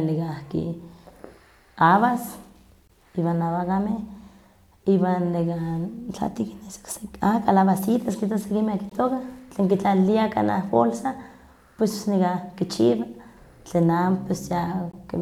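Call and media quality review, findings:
Hard-edged 20 ms holes at 2.88–2.90, 8.90–8.92 and 14.92–14.94 s, 6 s apart. Gap between chunks: silence inserted at each chunk join during packaging or playback.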